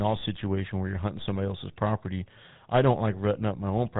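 Throughout, the speech has a buzzy, gravelly roughness with nothing above 3.8 kHz, the mark of the GSM full-rate codec, consistent with 13 kbps, rebuilding the voice from sparse pulses.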